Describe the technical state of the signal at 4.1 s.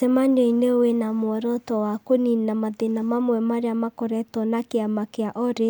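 At 4.1 s the speech signal is intact, with no audible technical fault at that moment.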